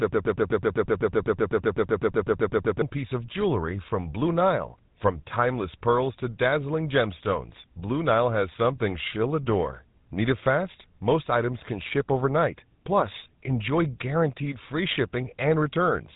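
Right from the start until about 2.82 s there's a broken-record loop: a 126 ms chunk repeats back to back about twenty times, likely a stalled stream resending its last fragment. Throughout, the speech has the buzzy, gravelly roughness of the GSM full-rate codec, with nothing above 3.8 kHz, which fits a 13 kbps GSM full-rate stream.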